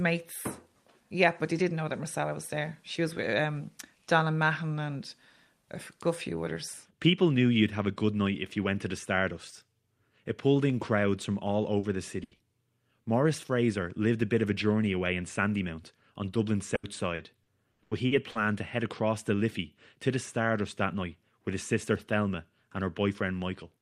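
It's a speech recording with network dropouts. Two short concealed packet losses hit right after "in crowds from all", at 11.79–11.86 s, and again at 12.35–12.42 s. Each time about 40 ms of audio never arrived, and the receiver papered over it by extending the last sound, leaving a quick smear or wobble. Squeezed between those, at 12.23–12.34 s, comes a burst of packet loss: roughly 80 ms gone in one go, bridged by a held, fading continuation before the speech picks up further along with that bit missing. Then from 16.75 to 18.38 s, just before "to head across the", there's repeated packet loss with a robotic sound. About seven gaps land in quick succession, the longest 80 ms, adding up to around 400 ms patched, about a quarter of that stretch, so it comes across choppy with pieces missing.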